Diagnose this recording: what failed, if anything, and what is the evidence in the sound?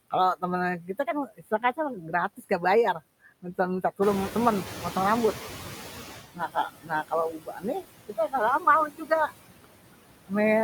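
Noise suppressor artifacts run through the whole clip, a call-processing fault. The suppressor pulls the steady background down by about 19 dB, so the noise sinks between the words and rises under them.

Speech cut by the noise suppressor happens from 0.82 to 2.51 s and from 6.34 to 9.32 s. Soft consonants and endings drop by up to about 16 dB and then about 21 dB, roughly 0.4 s and 1.5 s in total. Syllables fade rather than vanish, which rules out packet loss.

The noise suppressor is catching up from 4.02 to 6.21 s. The room noise jumps by about 13 dB near 4 s and then sits about 11 dB below the speech. The suppressor's noise estimate lags, so the noise passes with less reduction at first, then sinks over 2.19 s to about 15 dB of cut. Only the background changes level, not the speech, so this is not a gain fault.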